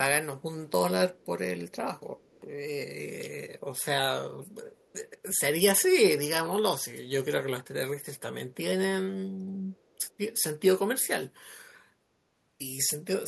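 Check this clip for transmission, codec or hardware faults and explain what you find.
There is one fault: echo leak. A faint, delayed copy of the speech, very quiet at around 35 to 40 dB below it and trailing by about 314 ms, surfaces in five short scraps at 1.16–1.26, 2.17–2.41, 4.76–4.93, 8.01–8.20 and 9.73–10.07 s. The likely cause is a far-end loudspeaker whose echo canceller let some of the playback picked up by its microphone get sent back.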